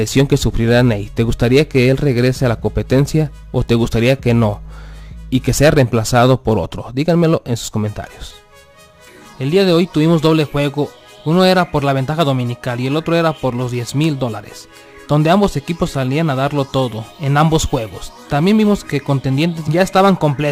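Throughout the audio, a crude rate conversion is at work: samples were repeated by nearest-neighbour picking rather than filtered resampling, and the repeat pattern fits a step from 44.1 kHz up to 48 kHz. The irregular timing error creates shifted, inharmonic copies of the material, sitting roughly 30 dB below the signal. It comes across as a gritty, inharmonic fizz riding on the louder and brighter passages from start to finish.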